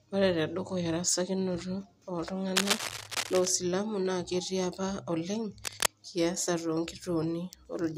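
A burst of dense, uneven scratching sits over the speech from 2.56 to 3.47 s, about as loud as the speech itself, and again from 5.64 to 5.90 s just after "apa oleng". This is cable scratch noise, likely from a worn cable or connector being moved so its contact resistance fluctuated.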